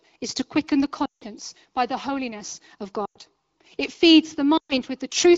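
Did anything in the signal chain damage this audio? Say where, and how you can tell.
Yes, there are lost AMR speech frames, a radio-link problem upstream of the AMR wideband decoder. There are three dropouts: 1.06 to 1.24 s, between "is to quicken the" and "by the holiness of"; 3.05 to 3.18 s, right after "by the holiness of"; and 4.57 to 4.77 s. They're about 160, 100 and 120 ms of lost speech. Each gap drops to near silence within two frames and then recovers a bit rough. That's the decoder concealing corrupted frames by repeating the last good pitch and vocal-tract settings with falling gain.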